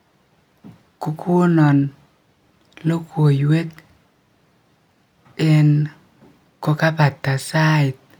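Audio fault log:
No technical audio faults are audible anywhere in the recording.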